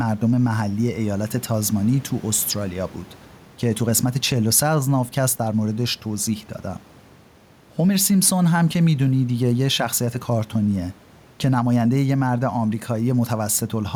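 A speech recording with gain pumping throughout. The room noise sits about 33 dB below the speech. The level swings by roughly 5 dB. Loud and soft passages sit squashed together. The likely cause is a microphone gain set far too high, with a fast limiter or compressor pulling it down on each peak.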